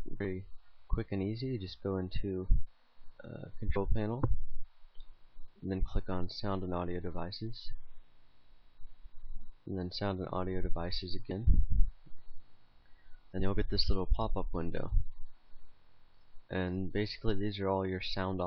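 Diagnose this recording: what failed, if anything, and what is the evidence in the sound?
Compressed frames skipped, at the codec or storage stage. At 3.75, 11.30 and 13.39 s the audio jumps ahead, losing roughly 70, 50 and 50 ms. Those gaps fit two or three whole 23.2 ms frames.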